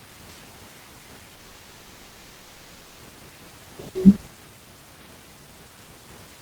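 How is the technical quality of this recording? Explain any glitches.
Quality suffers from one long break in the speech. A long network dropout runs from 1.35 to 3.01 s. Likely no audio reached the receiver for about 1.6 s, so it stretched the last sound into a fading buzz that fills the whole gap. Speech then resumes with that stretch missing.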